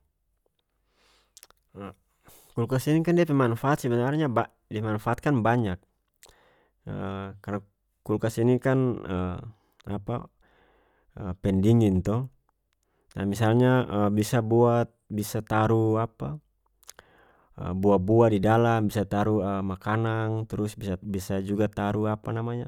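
No technical faults can be heard anywhere here.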